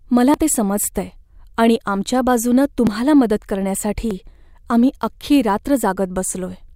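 A dropped buffer (overrun) occurs at 0.34 s, just before "ते समजतंय आणि आमच्या", again at 2.87 s, right after "समजतंय आणि आमच्या बाजूनं", and at 4.11 s, just before "आम्ही अख्खी". Each is a jump where the speech skips forward with no gap, losing roughly 20 ms at the first two and about 10 ms at the third. The likely cause is the recording software falling behind, so the hardware overwrote samples before they were collected.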